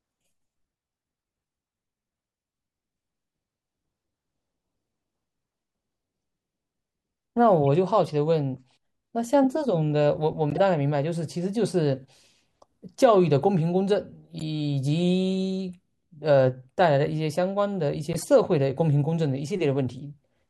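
Corrupt frames got decoded at 7.63–7.65, 10.50–10.60, 14.37–14.42 and 18.13–18.24 s: damaged compressed data misplacing energy in frequency, giving short chirpy noise bursts, the last one noticeably louder.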